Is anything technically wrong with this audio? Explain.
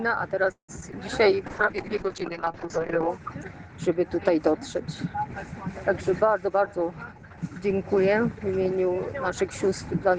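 Yes, there are four kinds of fault, all from the call's network path.

From 0.51 to 0.70 s there is a call audio freeze, likely from packets held up in transit that left the jitter buffer empty. The receiver stretched the last sound for about 0.17 s, fading to roughly 0.1 s of silence, then resumed where it stopped, so the sound is delayed rather than lost.

Right after that, short concealed packet loss hits at 0.80 and 0.92 s. About 20 ms of audio never reached the decoder at each point, and the receiver papered over the holes by extending the preceding sound, leaving brief smears.

From 1.48 to 3.16 s comes a call bitrate drop. The encoder was pushed from 64 kbps down to 6 kbps, holding the lowest rate for about 1.6 s, and the audio bandwidth narrowed from 20 kHz to 8 kHz. The sound turns muffled and rough until the rate recovers.

From 6.41 to 7.63 s there is a jitter buffer speed-up. 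With too much audio queued, the receiver cut out short pitch-period slices, about 0.15 s in total, to reduce delay. The sound runs about 13% fast at unchanged pitch and feels hurried.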